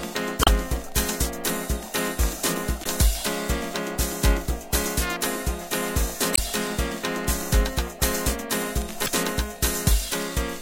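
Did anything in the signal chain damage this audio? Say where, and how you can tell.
Yes: brief glitches at 0.41–0.48, 2.81–2.86, 6.32–6.39 and 9.04–9.08 s mark damaged data in the compressed stream, where the codec decoder misreads corrupted frames and loses sync.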